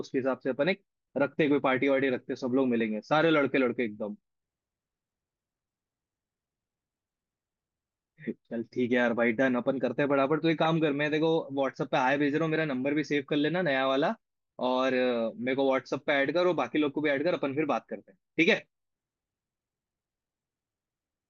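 Speech recording with no audible technical faults.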